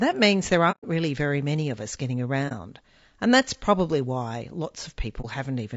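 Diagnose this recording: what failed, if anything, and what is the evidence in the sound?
Codec stage. The speech is rough and grainy throughout, with noise between harmonics. This is likely low-delay AAC compression, fitting a low bitrate near 32 kbps.

Network stage, AAC frame loss with muting. A soft-edged hole falls at 0.71–0.84 s after "means there", and brief dips at 2.48–2.52 s after "many of us getting", and 5.21–5.25 s. The decoder zeroed the missing frames, and the overlapping windows faded each gap out and in.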